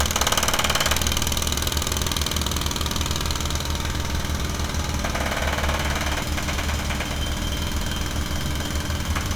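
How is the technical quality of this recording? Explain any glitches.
The recording holds together technically, with no audible glitches or interruptions anywhere in the signal.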